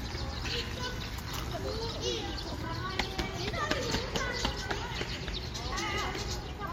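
A short recording of sounds with one fault: damaged data in the compressed stream at 5.71 s, heard as a brief glitch of about 0.02 s. Corrupted bytes there made the decoder misread the affected frame and lose sync until it found the next valid frame header.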